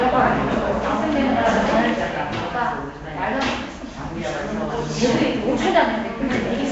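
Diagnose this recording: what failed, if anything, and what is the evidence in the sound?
Nellymoser compression runs throughout: a rough, hissy haze clings to the sound, which has a smeared, underwater quality, and nothing is present above 7.7 kHz. The codec stage is the likely cause; coarse block coding fills starved bands with noise, consistent with roughly 32 kbps.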